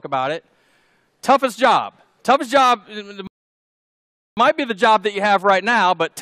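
At 3.27 s the audio just drops to silence until 4.37 s, a rebuffering stall. Playback ran dry waiting for more data, so it froze, then picked up exactly where it left off. Nothing's missing, but roughly 1.1 s of dead air gets inserted.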